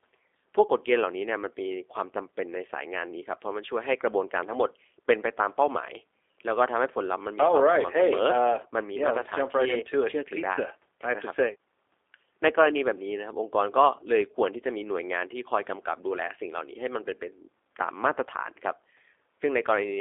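From start to finish the speech has been through the G.729 codec, G.729A flavour by the sound of it. Everything sits inside a 300 Hz to 3.6 kHz telephone band, so it's thin and boxy. The damage is plainly audible: the codec rebuilds the voice from a vocal tract model, a pitch predictor and a few pulses per frame, which leaves it rough and slightly synthetic, about what you'd expect at 8 kbit/s.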